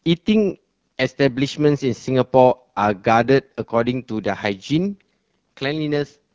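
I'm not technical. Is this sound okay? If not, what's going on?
No. Throughout, the speech passes through the AMR wideband (HD Voice) codec at a low setting, which leaves it audibly rough and raspy, like a strained phone call.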